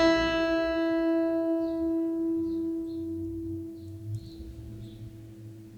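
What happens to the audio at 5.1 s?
Nothing goes wrong at 5.1 s: the music plays through that moment intact, with no dropout, click or other audible fault.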